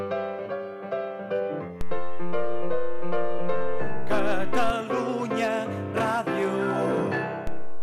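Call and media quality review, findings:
DC step, 1.81 s to 4.70 s and 7.47 s to end: baseline jumps about -18 dBFS, then about -20 dBFS. Low thump at each transition, sound itself unaltered. Probable converter recalibration or offset-carrying input switched in; offset holds, returns at 4.70 s.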